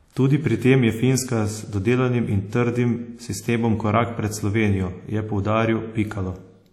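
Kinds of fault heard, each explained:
WMA compression: The speech carries clearly audible ringing and washy smearing, with a hiss that swells and fades with the signal and nothing above 17 kHz. This likely comes from transform coding with coarse quantisation over long blocks, which fits about 48 kbps.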